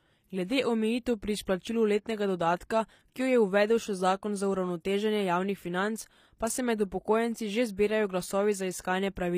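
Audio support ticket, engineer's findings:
Treble gritty and metallic throughout, s sounds lispy, nothing above 15.5 kHz. Likely HE-AAC compression: upper band rebuilt from copied lower bands, harmonics misaligned. Unlike plain lowpass, top end still bright but synthetic. Damage level fits a 24 kbps stream.

Pre-echo at 7.77 s: short hiss about 18 ms ahead of an attack, onset softened. Codec spreads quantisation noise across its block, so it fills the quiet gap before the transient. Unlike an echo, it precedes the sound and is noise, not a copy.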